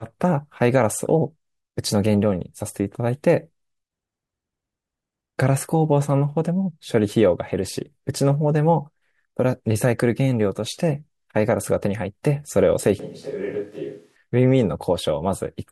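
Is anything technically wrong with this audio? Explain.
Yes. From about 13.00 to 14.16 s, the speech suddenly turns roomy and hollow. The bass thins out and the level falls by roughly 10 dB. Background room noise becomes audible, sitting around 35 dB below the speech. At 14.16 s the close, full sound returns just as abruptly. This is likely a switch to a distant microphone, with the close microphone's signal dropping out and a farther pickup filling in.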